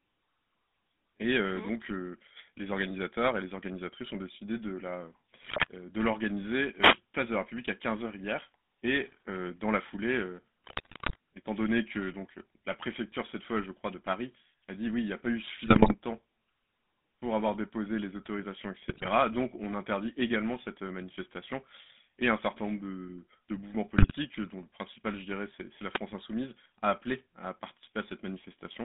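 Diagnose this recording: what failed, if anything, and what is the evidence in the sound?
Codec stage: the whole speech clip has the buzzy, gravelly roughness of the GSM full-rate codec, which fits its 13 kbps coding. The band runs only from 200 Hz to 3.6 kHz. The coarse pulse-driven excitation replaces natural voicing, so the voice has a grating texture.

Network stage: GSM bit errors break the decoding into squawks and gargling at 5.42 to 5.67 s, 10.64 to 11.16 s, 15.66 to 15.95 s after "n'y a pas eu", 18.88 to 19.09 s after "avoir déposé les autorisations", and 23.98 to 24.12 s between "nombre de de mouvements" and "dont le principal je". Corrupted filter, pitch and gain parameters distort the spectrum and level frame by frame.

Analogue radio stage, before the call: a wireless microphone noise hit shows as a brief swish of static at 6.79 to 6.98 s and a shorter burst at 25.94 to 25.99 s. 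The FM radio signal faded, so receiver noise rose over the voice for those moments.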